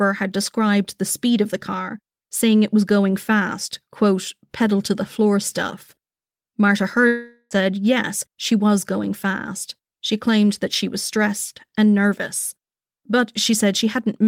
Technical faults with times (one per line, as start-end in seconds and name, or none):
7.07-7.53 long network dropout